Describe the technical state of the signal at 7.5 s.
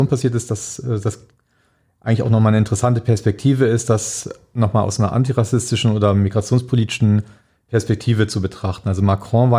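At 7.5 s the speech signal is intact, with no dropout, distortion, glitch or other fault audible there.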